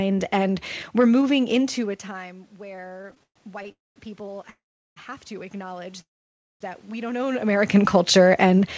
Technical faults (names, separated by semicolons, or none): automatic gain rising; repeated stalls (stutter); call audio freeze